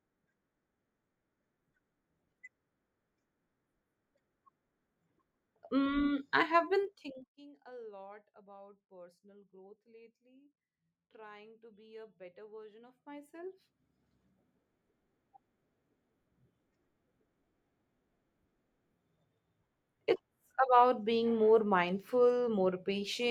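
A level control is being moved in unsmoothed steps, about forty a second, producing zipper noise twice. From 6.80 to 7.36 s, just after "I have", the speech drops roughly 25 dB in 1 dB steps, each step a small click, heard as a rapid ticking zip. From 12.82 to 14.07 s, after "be a better version", the level climbs back about 25 dB in much finer steps, and the same zipping rides on the sound.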